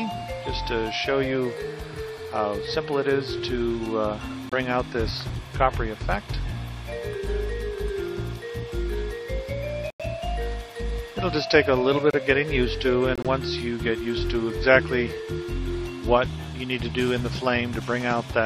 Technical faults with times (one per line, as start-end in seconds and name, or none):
4.49-4.53 corrupt frame muted
9.90-10.01 corrupt frame muted
12.11-12.15 corrupt frame muted
13.15-13.26 corrupt frame muted